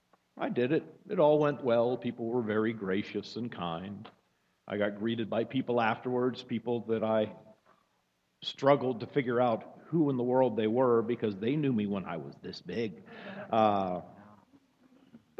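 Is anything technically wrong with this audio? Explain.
No, nothing technically wrong stands out here; it all sounds just as it should.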